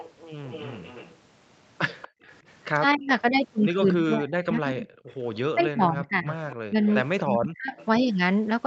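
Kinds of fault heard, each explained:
Echo leak: A faint, delayed copy of the talker trails the original by about 237 ms. It is strongest at the start, roughly 20 dB below the direct sound through the first three seconds. It comes back more weakly around 5.1 to 5.4 s and again from 6.5 to 7.9 s. The likely cause is a loudspeaker at the far end whose echo canceller let part of the microphone pickup escape and sent it back down the line.
Background gated by the echo canceller: At about 2.1 s the room sound briefly collapses, falling by about 39 dB for roughly 150 ms before returning. That short hole in the background fits an echo canceller clamping the microphone hard while its loudspeaker was active, then releasing it once it judged the echo risk had passed. The effect is a momentary, unnatural silence.
Speech suppressed in double talk: From about 2.9 s to 7.8 s the talker's voice repeatedly dips, thins out or drops away in pieces. 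At its deepest it falls by around 40 dB, and the losses add up to roughly three seconds. This likely happened because both sides spoke at once, and the echo canceller, unable to tell the local talker from the loudspeaker echo, turned everything down together.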